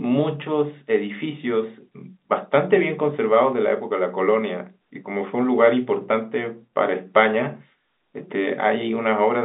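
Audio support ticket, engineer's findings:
Nothing stood out on listening to the speech over the telephone-band G.711 line.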